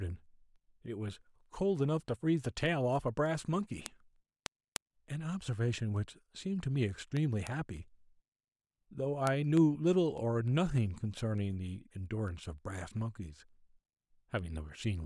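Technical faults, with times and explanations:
0.26–14.99 s, word clock ticks: sharp clicks about every 0.3 s, around fifty in all, as an unlocked receiver clock, roughly 150 ppm off, drops or repeats a sample.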